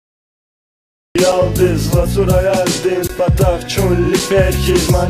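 The audio has a cut-off start. It is digital silence until 1.15 s, then the sound begins abruptly mid-event, with no attack or fade. Three blocks of digital silence follow, at 1.32 s, 3.08 s and 4.19 s. Each is a sudden dropout to silence. The first and last last 5.8 ms, which fits a 256-sample buffer left unfilled. The middle one lasts 19.5 ms.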